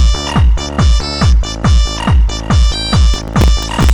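From 3.14 to 3.90 s, processor overload crackle: very short buffers of around 1.5 ms repeatedly miss their deadlines, about twenty of them, each replaying stale audio with hard edges. It sounds like gritty tearing, seen as jagged waveform steps and scattered vertical broadband streaks on a spectrogram.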